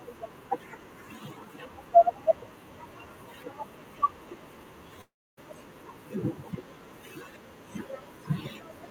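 It's a speech clip with one long network dropout from 5.01 to 5.39 s: the last sound smears into a fading buzz, then about 0.28 s of silence, and speech resumes with roughly 0.36 s missing, likely from packets lost in transit.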